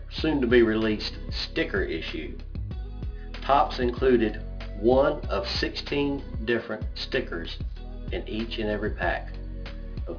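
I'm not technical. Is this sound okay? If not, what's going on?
No. Aliasing runs through the whole clip, start to finish. Everything sounds cut off at about 5.5 kHz, which points to the audio being squeezed down to a much lower sample rate, around 11 kHz, without first removing the high frequencies it could no longer hold. Those highs don't just disappear. They fold back down as wrong, unrelated tones that make bright parts of the sound gritty and metallic.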